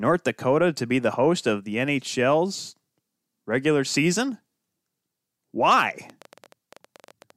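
It's a speech clip, and near the end, from 6.10 to 7.31 s, there's a train of clicks: around twenty similar pops at about 14 per second, unevenly spaced and peaking roughly as loud as the speech. That's likely interference from nearby equipment or a faulty connection or power supply.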